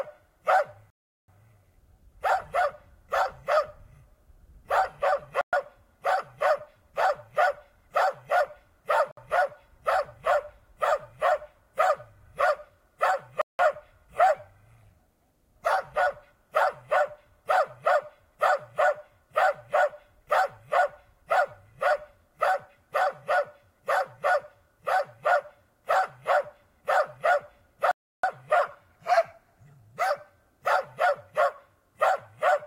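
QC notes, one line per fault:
0.90–1.28 s, 5.41–5.53 s, 9.11–9.17 s, 13.42–13.59 s and 27.91–28.24 s: Bluetooth stall. The audio drops to dead silence, then carries on. The gaps last 379, 117, 60, 176 and 322 ms. They come at irregular intervals, with a long clean stretch before the last one. The likely cause is interference holding up packets on the wireless link. The headphone buffer runs empty, and playback waits for the resent data.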